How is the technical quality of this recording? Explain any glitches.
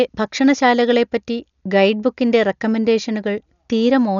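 Poor, with heavy codec damage from start to finish. Likely Dolby Digital compression at a very low bitrate, around 48 kbps, removed everything above 7 kHz and starved many frequency lines of bits, leaving the speech dull with rough, fluttering noise.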